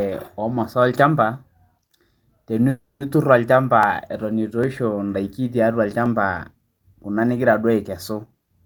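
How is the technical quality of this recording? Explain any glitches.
The recording has two kinds of glitch: one call audio freeze and four isolated clicks from dropped samples.

From 2.69 to 3.02 s there is a call audio freeze. The sound stalls and is stretched into a fading buzz, ending in about 100 ms of silence. Packets were likely held up and the jitter buffer ran dry. Nothing is lost. The speech resumes 310 ms late.

Dropped samples cause sharp single clicks at 3.83, 4.64, 6.06 and 8.05 s, the last just after "nigira duo". Each is likely a loss of well under a millisecond. The waveform jumps abruptly, producing a brief tick rather than any missing sound.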